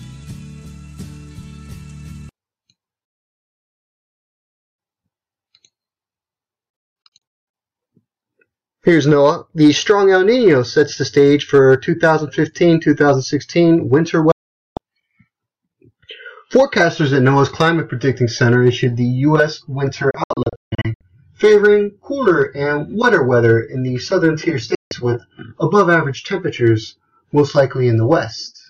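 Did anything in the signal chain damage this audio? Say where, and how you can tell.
Yes. Digital broadcast dropout at the receiver: it lost frames and muted until clean ones returned. The sound snaps to silence within about 3 ms, in scattered holes at 6.70–7.54 s and 20.11–21.01 s, and single gaps at 14.32–14.77 s and 24.75–24.92 s.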